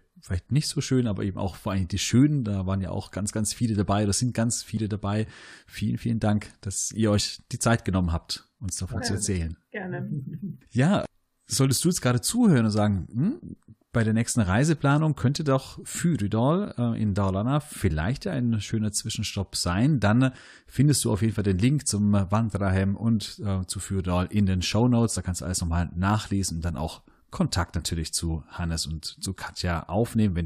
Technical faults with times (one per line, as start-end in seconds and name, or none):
4.77 damaged data in a compressed stream
7.19 damaged data in a compressed stream
17.89 damaged data in a compressed stream
25.16 damaged data in a compressed stream
29.25 damaged data in a compressed stream